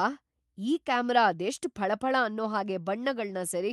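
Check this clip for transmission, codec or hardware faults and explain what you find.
No transmission, codec or hardware faults.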